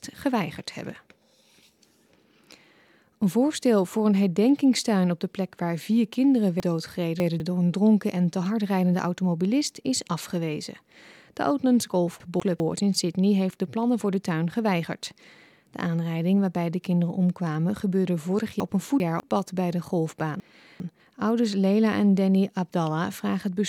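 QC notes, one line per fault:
6.6–7.4 s, 12.2–12.6 s, 18.6–19.2 s, 20.4–21.0 s: chunks out of order. A 200 ms block arrived late and played after blocks that should follow it (three blocks late at 6.6 s, one at 12.2 s, two at 18.6 s and 20.4 s). Nothing is lost, but the sound jumbles, and each event has three hard joins.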